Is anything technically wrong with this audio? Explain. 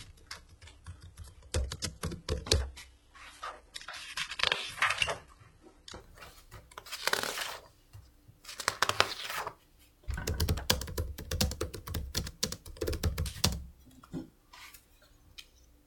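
Yes. From 0.0 to 6.0 s, this is an adaptive stream starting at a low bitrate. Treble sounds thin or synthetic, with stronger artefacts, fitting roughly 16 kbit/s HE-AAC. At 6.0 s quality jumps, seamlessly, toward about 96 kbit/s AAC.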